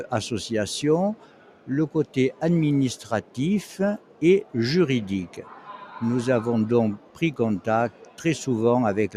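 Throughout the clip, the level pumps and flutters: sudden onsets mostly come through while anything held or decaying sinks away, swinging by around 10 dB and leaving the sound thin and unsteady. A noise suppressor applied to music or sounds was left running. It was designed to strip steady background from speech, so here it treats sustained tones, ambience and reverberant tails as noise and turns them down as soon as the initial attack has passed. The worst dips are sound cut by the noise suppressor at 1.15–1.69 s, 2.05–2.42 s, 3.01–3.38 s, 3.98–4.22 s, 5.27–5.95 s, 6.97–7.21 s and 7.91–8.21 s. In each span, part of a lingering sound drops by about 10 to 12 dB, with the deepest cut of about 12 dB in the span at 1.15–1.69 s. Decays are chopped off early, leaving a gap where the sound should be fading naturally. The spans at 1.15 s and 5.27 s lose the most material, about half a second each, and the others lose a fraction of that.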